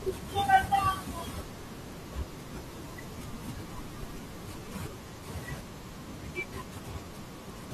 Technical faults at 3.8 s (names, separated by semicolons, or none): none